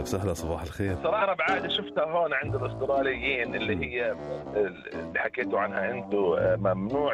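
At 1.21 to 1.23 s a skip ahead occurs: roughly 0.4 s of audio was discarded while later audio was already queued, so playback leaps forward with no gap. The waveform shows an abrupt splice, and the spectrogram has a hard vertical seam where the two sides of the jump meet.

From 1.79 to 2.14 s a jitter buffer speed-up follows, as the receiver trims pitch-period-sized pieces to shed excess delay, about 40 ms in all. Sound runs at 109% speed, hurried, with unchanged pitch. Harmonics stay level on a spectrogram while events crowd closer together.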